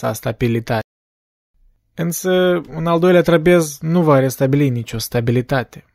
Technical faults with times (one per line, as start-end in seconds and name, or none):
0.81-1.54 playback stall